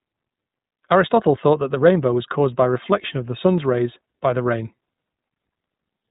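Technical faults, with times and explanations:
Throughout, iLBC codec: the speech went through a narrowband iLBC coder, and the sound fits its 15.2 kbps mode with 20 ms frames, each frame's excitation coded independently. Nothing above 4 kHz survives, and the speech has a plainly audible rough, synthetic edge.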